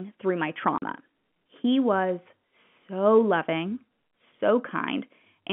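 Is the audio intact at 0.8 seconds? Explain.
No. From 0.78 to 0.82 s, right after "through my", packet loss filled with silence cuts a 40 ms hole, which fits two 20 ms packets. The hole has hard edges, and the gap is silence rather than the smeared or repeated sound of concealment, beneath the narrow telephone band.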